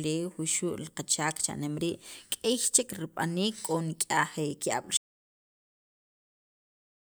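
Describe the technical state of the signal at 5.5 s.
Audio dropout to silence from 4.97 s to the end: the speech cuts off into total silence with no room tone, likely from input lost while recording continued.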